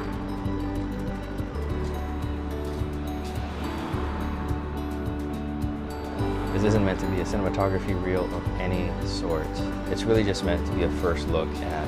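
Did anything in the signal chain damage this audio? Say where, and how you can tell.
Yes. From 0.0 to 1.74 s the audio runs about 1.81 times fast at unchanged pitch, sounding rushed. This is a time-stretched section, likely from software squeezing it by dropping short pieces.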